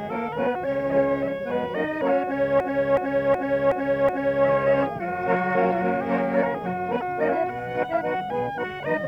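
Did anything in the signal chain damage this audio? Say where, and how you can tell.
Yes, a system hang loop at the driver or buffer stage, from 2.60 s to 4.46 s. One 0.37 s slice of sound plays five times in exact succession, giving a stuttering repeat at about 2.69 Hz. That length fits a 16384-sample ring buffer that the hardware kept cycling while the driver stalled. On a spectrogram the same block repeats, identical, with sharp seams at each loop point. The waveform shows matching copies. Afterwards the sound resumes with little or nothing missing.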